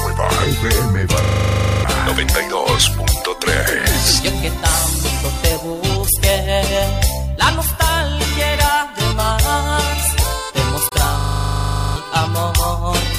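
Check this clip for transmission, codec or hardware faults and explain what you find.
Two kinds of fault turn up: a stuttering freeze that happens twice and one brief gap.

System hang loop, 1.24 to 1.84 s and 11.2 to 11.96 s: a hard, buzzy rattle at 25 Hz, where a 40 ms scrap repeats 15 and then 19 times. The driver or computer froze while the hardware kept replaying one ring-buffer segment, and roughly 0.7 s of audio is missing each time.

Bluetooth dropout, 10.89 to 10.92 s: the sound cuts to silence for about 23 ms and then resumes further along, as though playback had continued underneath. This is likely a wireless packet that arrived too late and was discarded, which fits a single lost packet.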